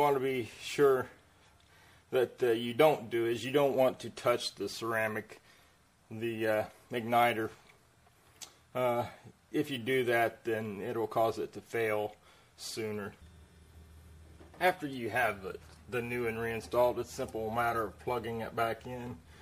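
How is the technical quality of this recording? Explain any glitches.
The recording has plainly audible codec damage throughout. It sounds watery and swirly from start to finish, likely MP3 compression at a low rate that fits about 64 kbps, where weak frequency components keep dropping in and out.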